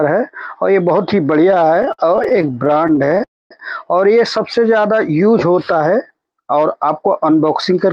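From 1.51 to 3.21 s the sound keeps catching and dragging in a repeated stall, or stutter: 33 short holds, the longest 57 ms, filled by continuing the last sound. Packets kept arriving late, so the jitter buffer repeatedly ran dry, adding 383 ms, about a quarter of that stretch.

At 3.24 s a call audio freeze sets in. The last sound buzzes briefly and fades, leaving roughly 230 ms of silence before the audio resumes at 3.52 s, 269 ms late. This is likely from packets held up in transit, emptying the jitter buffer.

Between 4.45 and 6.25 s the audio drifts slower at an unchanged pitch, with stretched-out sounds. This is a jitter buffer slow-down. To rebuild its reserve, the receiver repeated short pitch periods and bits of pauses, adding 177 ms and playing the stretch at 91% speed.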